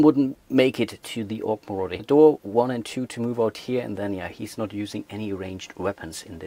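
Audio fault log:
1.99–2.01 s, skip ahead: About a second of audio never reached playback, either lost in transit or discarded when the jitter buffer overflowed while later audio was already queued. The receiver jumped straight to that later audio and inserted no fill. The two sides of the cut join almost directly, so the sound lurches forward with no audible gap. Whatever fell in that stretch is simply absent, and the delay drops by about a second at the jump.
2.11–3.41 s, jitter buffer speed-up: After the jump the jitter buffer still held more audio than its target, so the receiver shortened playback to bring the delay down. It removed many short slices, each one or a few pitch periods long, and together they came to roughly 150 ms over this span. The audio runs at about 110% of normal speed with its pitch unchanged, so this stretch sounds rushed.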